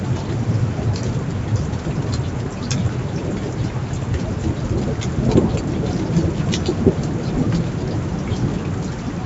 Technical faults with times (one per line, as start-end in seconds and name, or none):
none